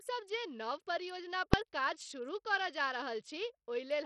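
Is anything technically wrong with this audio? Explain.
Yes, there are two problems, one running the whole way through and one sharp event.

The whole clip has heavy codec damage that's likely Bluetooth SBC compression. The speech sounds gritty and coarse, and the treble keeps dropping out and flickering instead of staying steady. SBC splits the signal into a handful of wide sub-bands and hands out bits with no hearing model. At a tight budget, which this sounds like (somewhere around 64 kbps), the weaker upper bands starve and everything else gets quantised roughly, leaving that grainy, aliased edge.

At about 1.54 s there's a single loud bang from invalid numbers at full scale. Something in the processing produced infinite or invalid values, and those got clamped to the maximum sample level. The block is only about 1.3 ms long, which fits a 64-sample processing block, so the full-scale start and end merge into one sharp crack rather than two separate pops.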